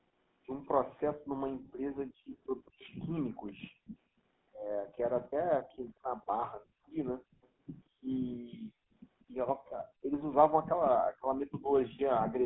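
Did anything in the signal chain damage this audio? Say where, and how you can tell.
Yes. At the codec stage it's GSM full-rate throughout. There's a plainly buzzy, gravelly roughness from the pulse-driven excitation, and nothing gets through above 3.8 kHz.

The background is gated by the echo canceller in call processing. The room sound ducks by about 40 dB at 1.22–2.29, 3.31–3.96, 4.83–8.93, 9.58–10.06 and 11.1–11.71 s, while the far-end loudspeaker was active.

There's echo leak in the call processing too. A faint copy of the speech trails by 191 ms at 2.31–2.89, 7.42–7.48 and 8.93–9.25 s, likely loudspeaker pickup the canceller didn't fully remove.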